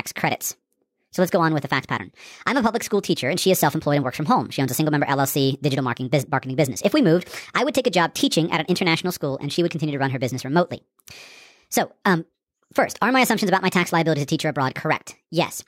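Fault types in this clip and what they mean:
Wrong sample rate: the speech runs about 1.38 times fast and sits roughly 5.55 semitones high, which fits 32 kHz audio played back at 44.1 kHz.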